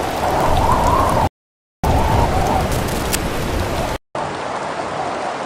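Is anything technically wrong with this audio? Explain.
Yes, there are three separate faults.

From 1.27 to 1.84 s there is a rebuffering stall. The sound drops to silence and then picks up exactly where it broke off, so nothing is skipped, but about 0.56 s of dead air is inserted. The player has exhausted the audio it had downloaded and simply waits for more data before continuing, which stretches the timeline rather than losing any content.

Between 2.71 and 3.15 s, a rough, uneven scratching and rustling sits over the sound. It is fairly prominent, only about 10 dB below the signal. This is cable scratch noise, likely from a worn lead, connector or control being moved. As it shifts, the contact resistance fluctuates rapidly, and those fluctuations inject dense, irregular bursts of noise into the signal path.

At 3.96 s, a short gap of about 0.19 s interrupts the sound. When it returns, it sounds duller and narrower through to the end, with nothing above 9.8 kHz and a new noise floor roughly 40 dB down. 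The loudness stays about the same. The input switched to a poorer device, likely another microphone or a headset's call profile, which passes a narrower band and brings its own background noise.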